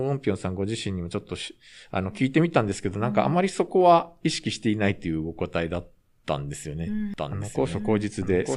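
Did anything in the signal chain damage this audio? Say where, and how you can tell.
Yes. From 7.17 s to the end, a doubled audio track appears: a full-band copy of the speech, about 5 dB quieter, trails roughly a second behind, starting abruptly with no decay. The spectrogram shows the same patterns repeated at a fixed offset, likely from a slower second capture path or misaligned edit.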